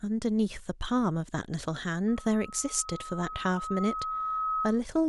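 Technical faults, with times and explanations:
2.08–4.83 s, loudspeaker feedback squeal: a single tone near 1.3 kHz swells steadily over roughly three seconds until it sits at about the level of the speech. The microphone is re-hearing its own loudspeaker, and at 1.3 kHz the loop gain tops one. On a spectrogram this shows as one bright horizontal line that thickens and brightens, and the waveform envelope fills out into a growing sinusoidal band.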